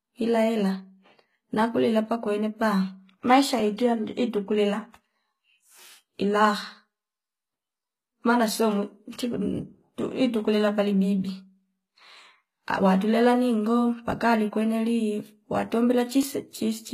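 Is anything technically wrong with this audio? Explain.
Yes. Throughout, the speech has plainly audible HE-AAC compression, likely at about 20 kbps. Its replicated treble sounds gritty and metallic on sibilants, and nothing remains above 14.9 kHz. From 1.49 to 16.23 s, clock drift buffer slips produce about seven regular clicks, one every 2.11 s. This fits a clock mismatch of around 700 ppm that drops or repeats roughly 70 samples at each slip.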